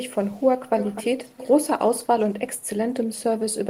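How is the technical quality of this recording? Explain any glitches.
The recording has one recurring fault. An echo leak appears at 0.16–0.48, 0.78–1.06, 1.23–1.52 and 2.22–2.34 s. A delayed copy of the speech returns 252 ms late. It is very faint first, strong second, clear third, and faint last. The likely cause is a far-end loudspeaker whose echo canceller let its microphone pickup through.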